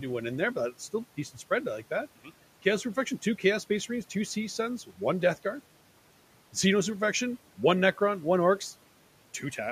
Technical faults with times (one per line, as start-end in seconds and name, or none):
0.11-9.71 clock slip clicks